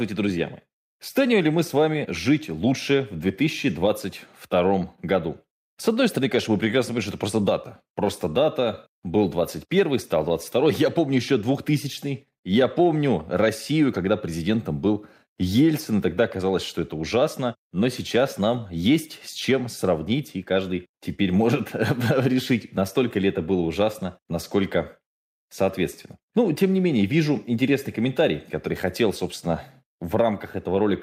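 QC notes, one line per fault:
No problems were noticed on listening to this speech.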